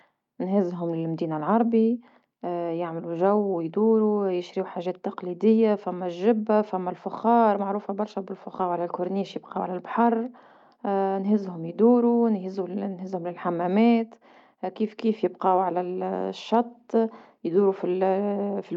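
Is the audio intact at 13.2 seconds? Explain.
Yes, at 13.2 seconds the speech runs on cleanly with no dropout, click, distortion or other fault to be heard.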